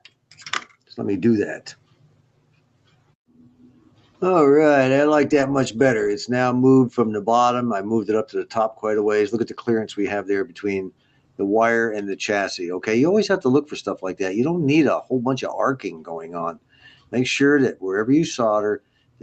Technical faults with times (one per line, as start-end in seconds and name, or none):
0.00-19.22 noise suppressor applied to music or sounds
0.01-0.37 sound cut by the noise suppressor
0.68-0.93 sound cut by the noise suppressor
1.75-4.22 sound cut by the noise suppressor
9.45-9.65 sound cut by the noise suppressor
10.45-11.40 sound cut by the noise suppressor
15.84-17.14 sound cut by the noise suppressor
18.79-19.22 sound cut by the noise suppressor